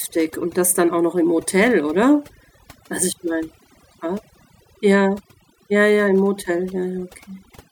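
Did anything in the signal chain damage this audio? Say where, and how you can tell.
Yes. A noise reduction stage, such as the one in call processing, was set too strong and causes overdone noise removal across the whole clip. It drives individual frequency bands down or off wherever they sit near its noise estimate, so quieter parts of the speech vanish along with the background, which breaks up into twinkling, warbling specks.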